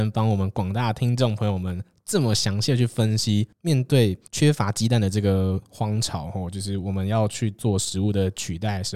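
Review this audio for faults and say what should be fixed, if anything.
Nothing here needs fixing, as I didn't hear a single fault anywhere in the recording.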